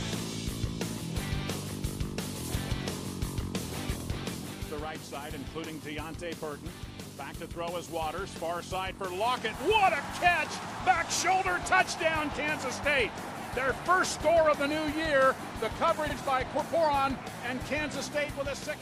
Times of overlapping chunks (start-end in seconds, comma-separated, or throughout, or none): 4.00-4.05, 10.05-10.10, 16.10-16.15